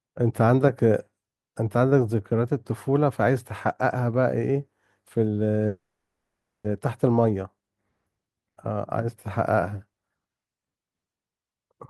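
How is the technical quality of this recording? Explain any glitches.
One glitch stands out: a call audio freeze from 5.67 to 6.67 s. The last sound is stretched, then fades into 0.7 s of silence. Speech resumes where it stopped, with nothing lost, but 0.97 s late. Delayed packets likely emptied the jitter buffer.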